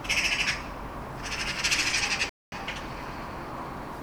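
A clip of sounds with one playback stall. At 2.29 s the audio drops to silence for 0.23 s, resuming at 2.52 s. The player likely ran short of data.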